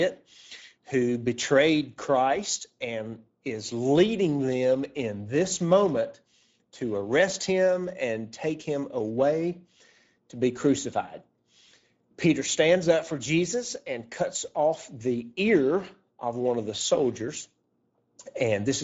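From start to end, the speech carries Speex codec damage. The coding is plainly audible: hoarse and noisy, which fits a bitrate near 17 kbps. Nothing sounds above 7.7 kHz. The upper band is only a noise-like fill.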